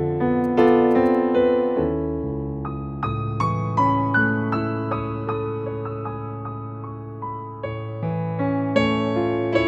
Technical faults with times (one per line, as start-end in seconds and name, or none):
0.44-1.15 GSM signalling bursts